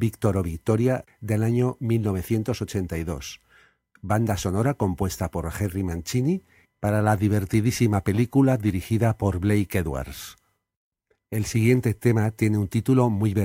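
Nothing stood out on listening to this speech recording.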